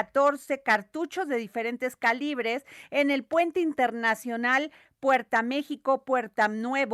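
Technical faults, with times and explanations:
No technical faults are audible anywhere in this speech recording.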